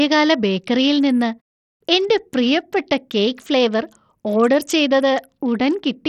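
Throughout, the speech has nothing above 16.2 kHz, plus flickering treble and gritty grain: likely heavy Bluetooth SBC compression starving upper sub-bands of bits, consistent with about 64 kbps.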